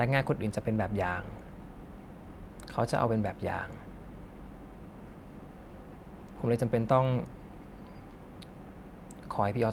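Listening to this speech recording, nothing technically wrong stood out at any point.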